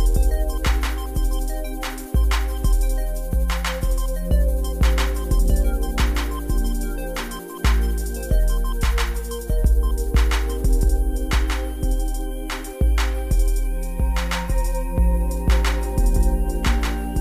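The audio carries a doubled audio track for its whole length: a second, full-band copy of everything trails the original by about one second, sitting roughly 5 dB below it. The late copy is clean and dry, with no decay or room colouring, so it reads as a distinct repeat rather than an echo from a space. The likely cause is the same signal being picked up again through a slower capture path, or two out-of-step copies left stacked in an edit.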